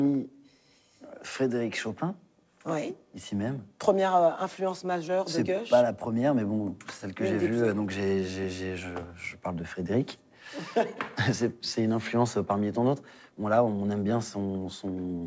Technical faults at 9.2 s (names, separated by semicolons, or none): none